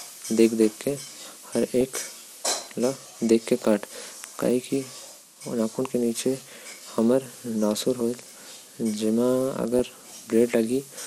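Speech, with a dull, band-limited quality and a gurgling, granular texture throughout, most likely from MP2 compression at a low rate, consistent with about 80 kbps. Upper sub-bands drop out and the remaining ones are coarsely quantised. Unlike burbling, this damage is steady rather than bursty. DAB burbling breaks in briefly from 1.7 to 1.81 s and again at 9.79 s: short blips of noise in individual sub-bands. This points to a small number of uncorrected reception bit errors, and these isolated blips stand apart from the constant codec dullness.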